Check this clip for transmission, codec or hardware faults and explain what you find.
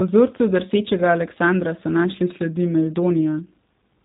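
There's one fault, and it runs the whole way through. G.729 codec: the speech is rebuilt from a vocal tract model and sparse pulses, so it sounds plainly rough and synthetic, with nothing above 3.8 kHz. That fits an 8 kbit/s G.729A link.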